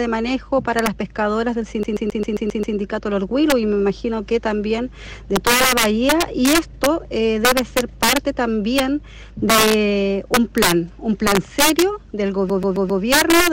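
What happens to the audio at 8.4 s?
At 8.4 s the audio is caught up in integer overflow that runs through the whole clip. The level is pushed about 6 dB past the integer limit, and instead of being held at full scale, every peak that goes over wraps to the opposite sign. A small share of samples, around one or two percent, are affected, each heard as a violent crack on loud moments. The waveform shows peaks snapping from one rail to the other, and the spectrogram shows thin broadband vertical streaks.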